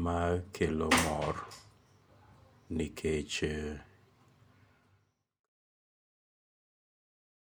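No faults to report; the speech fades out smoothly from around 4 s to 5.50 s, with no click or hard edge at the end.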